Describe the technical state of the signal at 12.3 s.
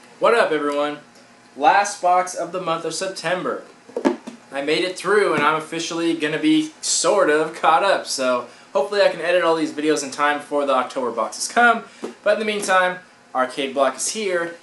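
At 12.3 s the signal is intact, with no dropout, clipping, distortion or other technical fault to be heard at that point.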